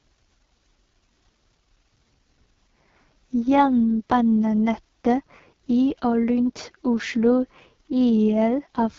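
From start to finish the speech passes through the AMR wideband (HD Voice) codec at one of its lowest rates, which fits about 6.6 kbit/s. At that rate the pulse-driven vocal tract model has too few bits to describe each sound, so the voice comes out rough and raspy. Above 6.4 kHz there is only synthesised noise, and nothing at all is heard above about 7.3 kHz.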